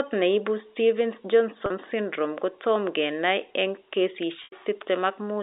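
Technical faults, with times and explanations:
1.66 to 1.70 s and 4.44 to 4.52 s, packet loss with pitch repetition: two dropouts on the G.711 phone line, about 40 ms and then 80 ms of audio gone. The receiver bridges each gap by looping the last pitch period and fading it over roughly 50 ms. The first is short enough to come out as a brief held, buzzy tone. The second outlasts the fade, so it sinks to silence before the speech cross-fades back in.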